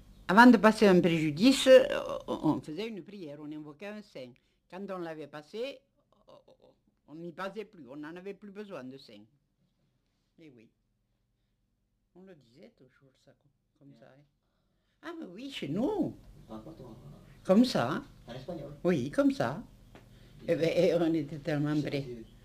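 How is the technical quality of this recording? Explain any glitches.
The recording has audible level-change glitches: two stretches of zipper noise. From 2.52 to 2.92 s the sound drops by roughly 20 dB in 2 dB steps, about thirty a second. From 15.36 to 15.84 s it rises by about 20 dB at around twenty steps a second. Each jump is applied abruptly rather than ramped, so every step leaves a tiny click, and the clicks blur into a gritty zipping during the move. The grit occurs only while the level is changing and stops once it settles.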